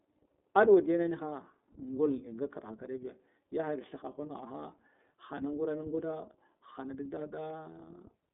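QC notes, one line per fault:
throughout, iLBC codec: the speech has passed through a narrowband VoIP coder working in 30 ms frames, each coded on its own without drawing on the previous one, at a rate that fits the 13.33 kbps mode. Nothing above 3.8 kHz survives, and the line band of roughly 200 Hz to 3.6 kHz leaves the voice thin and boxed-in. The frame-by-frame excitation coding adds a plainly audible rough, slightly synthetic buzz to the voice.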